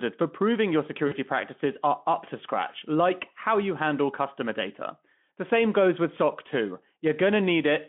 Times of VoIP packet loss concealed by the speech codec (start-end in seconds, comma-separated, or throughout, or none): 1.07-1.13